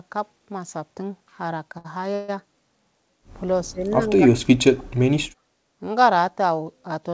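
At 1.78 to 1.86 s there's a short stall from a late packet: the jitter buffer ran dry, so the last bit of speech gets held for about 65 ms, then carries on with nothing lost.

From 2.14 to 2.30 s comes a call audio freeze. The sound stretches into a fading buzz for roughly 138 ms without dropping to silence, then resumes right where it stopped. That's likely packets held up in transit emptying the buffer.

Between 3.65 and 5.07 s the speech is suppressed in double talk, dipping and cutting out in pieces for about a second in total, at worst by around 40 dB. The likely cause is the echo canceller ducking the talker while the far side was speaking too. Throughout, nothing comes through above 8 kHz, which fits a wideband call codec like G.722.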